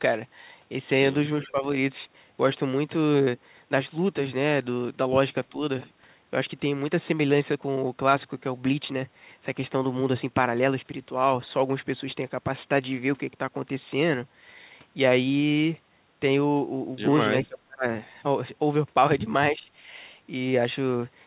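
An echo canceller on the far end, likely working against a loudspeaker, failed to remove all of its own pickup from this speech recording. The result is an echo leak from 1.43 to 1.47 s: a brief, faint copy of the speech returning about 374 ms late and sitting roughly 25 dB below the direct sound, heard as a scrap rather than a sustained echo. Immediately after, the same canceller shows speech suppressed in double talk, likely because it could not tell the near talker from the loudspeaker echo while both were active and so turned everything down. The speech dips from 1.47 to 1.64 s, from 5.51 to 5.57 s and from 19.51 to 19.67 s, each time by around 10 dB for a short stretch. The deepest cut comes from 17.48 to 17.85 s, where the level falls by roughly 35 dB for close to a third of a second and the speech nearly drops out. Throughout, the G.711 call path limits the sound to nothing above 4 kHz, giving it a narrowband telephone quality.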